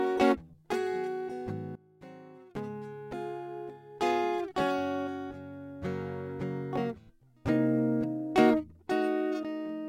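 Sample clock jitter runs throughout: a clock wandering by a few microseconds mistimes each sample, adding a gritty hiss that swells with loud, bright passages, around 40 dB below the music. From 1.75 to 2.55 s the music drops by about 20 dB to a faint copy, likely one channel inverted cancelling its shared centre content.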